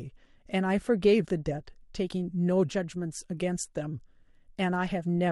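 Speech recording; no technical faults detected.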